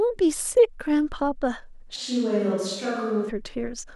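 A switch to a distant microphone runs from 1.97 to 3.28 s. The speech abruptly turns roomy and hollow, loses bass, drops about 5 dB and gains faint room noise. The close microphone's signal likely dropped out, leaving only a farther pickup, until it snaps back.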